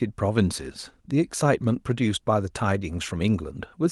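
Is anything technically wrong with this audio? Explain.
No, the speech signal arrives intact and continuous, with nothing in it that points to a technical problem.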